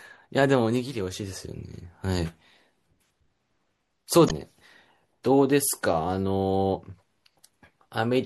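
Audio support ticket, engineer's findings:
Watery, swirly treble with smeared attacks throughout, likely MP3 compression at a low bitrate, consistent with about 64 kbps; encoder drops weak frequency lines and cuts high end.

Short glitch from 4.26 to 4.31 s: damaged data in the compressed stream, decoder losing frame sync and resyncing at the next header.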